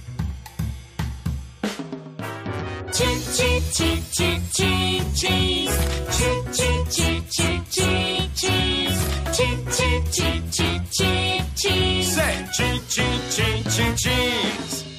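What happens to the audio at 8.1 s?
Nothing goes wrong at 8.1 s; the audio plays through that moment intact, with no dropout, click, glitch or other fault.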